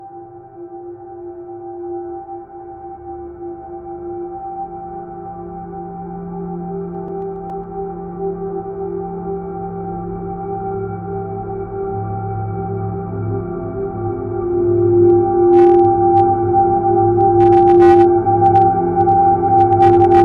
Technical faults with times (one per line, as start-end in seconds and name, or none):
6.81-7.64 CD scratch ticks
15.10 hard clipping
15.53-16.20 hard clipping
17.21-18.04 hard clipping
18.45-18.64 hard clipping
19.01-19.12 hard clipping
19.59-20.22 hard clipping